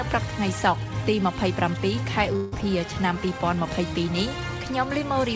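From 2.36 to 2.54 s the sound breaks up. A long network dropout is the likely cause. For about 0.16 s the receiver stretches the last sound into a fading buzz. Then the audio resumes, with the lost part missing. Throughout, the call path leaves nothing above 8 kHz.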